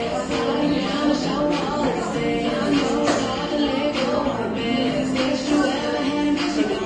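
From start to finish, the audio carries layered compression damage and has no content above 9.5 kHz. Different codec artefacts are heard together. These textures don't belong to a single encoder. The likely cause is transcoding between lossy codecs, with the sound passing through something like a low-rate AAC stage, then Vorbis, and finally MP3. Each pass encoded the previous artefacts as signal and added its own, while the lowest band limit in the chain set the 9.5 kHz ceiling.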